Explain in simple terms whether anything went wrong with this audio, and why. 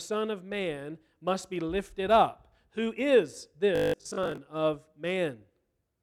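From 3.76 to 4.38 s the speech turns into a rigid, metallic buzz with robotic sound from repeated short buffers. The buzz sits at a fixed pitch of 50 Hz, which fits a tiny 20 ms slice of audio being played over and over. The likely cause is new audio arriving too slowly, so the playback filled most of that stretch with repeats while the real speech in between was skipped.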